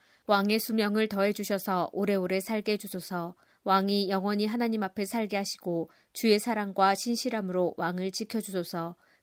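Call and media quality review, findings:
No faults found in the speech clip. No impairment is audible at any point.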